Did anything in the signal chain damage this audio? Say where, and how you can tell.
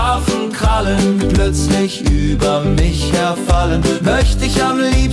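No, nothing in the signal chain damaged this audio. I hear no sign of a problem at any stage between capture and playback.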